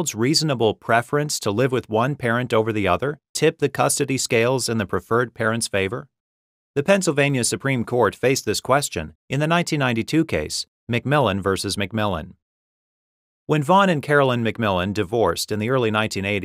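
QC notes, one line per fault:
Nothing stood out on listening.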